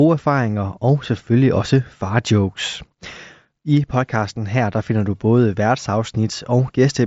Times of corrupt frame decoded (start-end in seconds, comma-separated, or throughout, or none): none